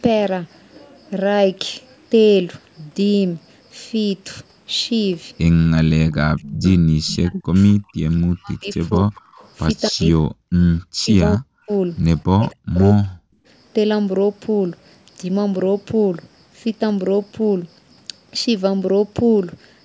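Speech, and the talker keeps getting ducked while the other end is talking. From 5.82 to 6.65 s, 7.06 to 9.19 s, 9.9 to 10.59 s, 10.92 to 11.69 s and 12.28 to 13.36 s the voice drops by up to roughly 40 dB or cuts out in chunks. That's speech suppressed in double talk, likely the echo canceller failing to separate this talker from its loudspeaker echo and pulling both down. There's also echo leak at 6.65 to 6.71 s, 8.95 to 9.49 s and 9.86 to 10.04 s: a faint delayed copy of the voice, about 250 ms late and roughly 25 to 30 dB under the main speech, likely from one side's canceller not fully removing what its speakerphone mic picked up.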